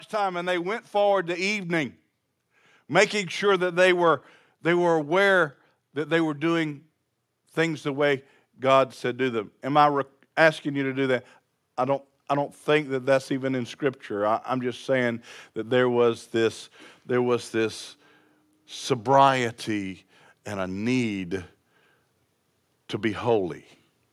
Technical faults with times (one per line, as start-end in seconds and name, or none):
0.19-2.00 automatic gain rising